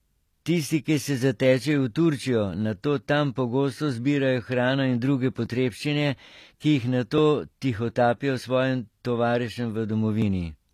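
HE-AAC compression runs through the whole of this speech clip, with plainly audible codec damage. The upper frequencies are likely not the original recording but a reconstruction: the codec keeps only the lower band and rebuilds the treble by copying lower bands upward under a coarse envelope, so the high harmonics do not line up with those below. The damage fits a low bitrate of around 24 kbps. Dropped buffers (overruns) occur at 5.46 s, just after "zbirajo hrano in druge", and at 10.22 s. At each point the sound jumps forward with no gap of silence, losing about 10 ms at the first and about 20 ms at the second. This is likely because the recording program failed to collect its samples before the hardware overwrote them, so the audio on either side of the lost piece is spliced directly together.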